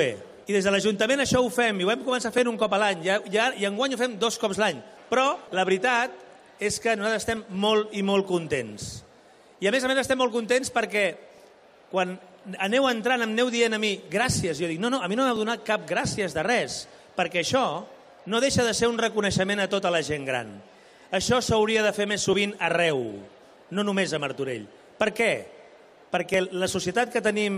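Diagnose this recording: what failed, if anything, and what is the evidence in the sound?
Seven tiny clicks or skips interrupt the sound at 2.38, 7.37, 11.38, 15.36, 16.35, 22.33 and 26.34 s, each where a sliver of about 12 to 18 ms is missing and the waveform jumps. This is overlap between stream segments at the playback stage. Consecutive 1-second segments carry time stamps that overlap, so the player trims the supposed duplicate, discarding audio that was never actually repeated. The cuts fall at segment boundaries.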